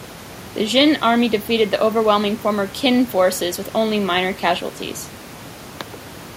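Nothing goes wrong in this speech recording; the only thing underneath it is a gentle bed of background sound from the room itself, sitting about 21 dB below the speech, and that belongs to the space rather than to anything in the chain.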